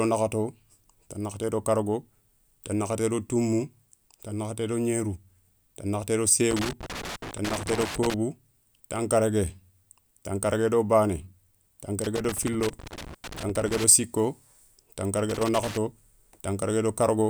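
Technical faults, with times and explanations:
6.51–8.14 s, 12.04–13.84 s and 15.30–15.77 s: loose connector crackle. In each of these windows the speech is broken up by an irregular burst of crackle and scratching. A worn or dirty contact is rapidly making and breaking, chopping the signal, and any DC on the line adds pops at each transition.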